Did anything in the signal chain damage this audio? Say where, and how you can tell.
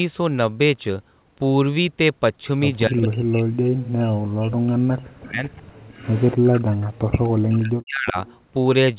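Yes. Speech dips by up to about 40 dB from 2.88 to 5.73 s and 6.35 to 8.17 s. Call processing likely suppressed speech in double talk.

A delayed copy, 249 ms behind, appears from 5.94 to 6.35 s at about -15 dB, then at 8.26 to 8.37 s. This is an echo leak, likely through the canceller.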